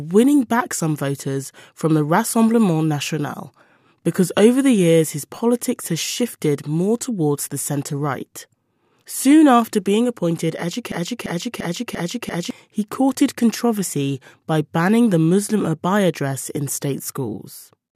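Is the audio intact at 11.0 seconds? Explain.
No. At 11.0 seconds the speech is caught in a broken-record loop running from 10.92 to 12.51 s, just after "after being appointed". A 0.34 s fragment repeats exactly five times. This is likely a stalled player or stream resending its last fragment. The audio meant for that span is lost before "he courted controversy by".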